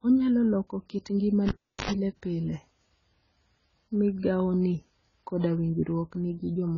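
AAC compression, likely, runs from the start: nothing above 7 kHz, with a dull, smeared, warbling quality that fits heavy coding at a low bitrate near 16 kbps. A cable pulled and plugged in occurs from 1.48 to 1.91 s: a pop, about 0.37 s of near silence, a 0.09 s burst of 50 Hz mains buzz as the tip touches, then another pop as the sound returns.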